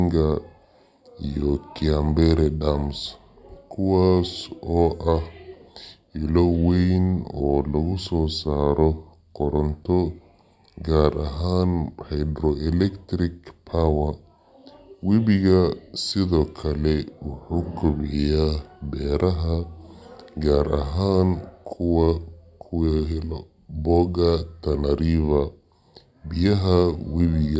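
Throughout the clip, the speech is played back at the wrong sample rate, with no conversion. The slowdown fits audio recorded at 22 kHz and played at 16 kHz. Everything runs at 0.726 times normal speed and sits about 5.5 semitones low, so voices sound deep and dragging.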